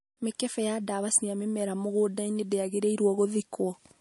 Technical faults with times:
0.00-4.00 MP3 compression

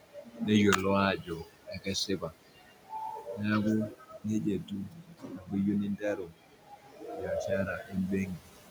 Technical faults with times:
0.02-0.40 speech cut by the noise suppressor
1.44-2.91 speech cut by the noise suppressor
4.90-5.49 speech cut by the noise suppressor
6.28-7.02 speech cut by the noise suppressor

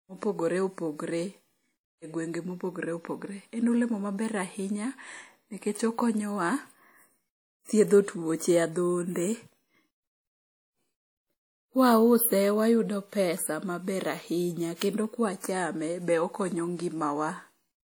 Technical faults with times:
0.00-17.98 WMA compression

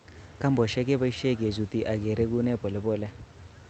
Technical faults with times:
none

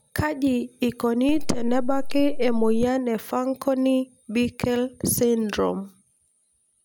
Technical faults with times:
1.29-2.83 DC step

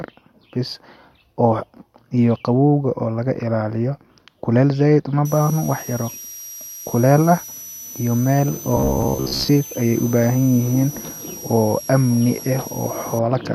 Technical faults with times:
5.25-13.19 switching supply whistle
8.77-9.49 robotic sound from repeated short buffers

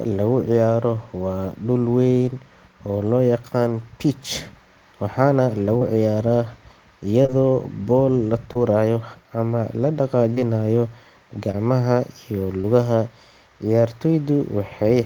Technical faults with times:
5.77-5.83 short concealed packet loss
7.23-7.31 short concealed packet loss
8.53-8.57 short concealed packet loss
10.35-10.40 short concealed packet loss
11.51-11.55 short concealed packet loss
12.61-12.65 short concealed packet loss

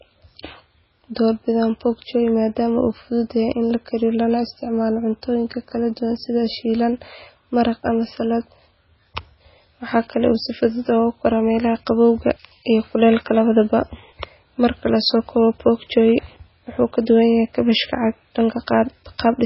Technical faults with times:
0.00-19.45 MP3 compression

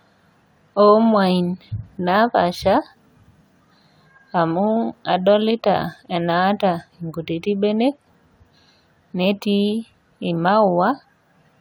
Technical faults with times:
none

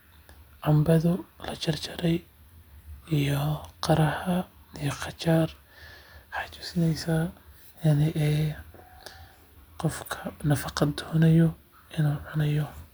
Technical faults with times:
none

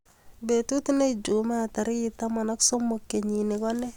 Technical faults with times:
none

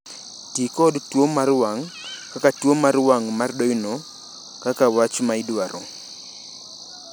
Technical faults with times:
none

